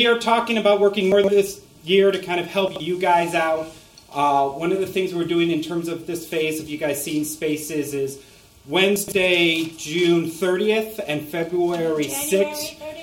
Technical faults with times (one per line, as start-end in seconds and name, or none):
1.12-1.28 chunks out of order
2.68-2.80 chunks out of order
8.96-9.12 chunks out of order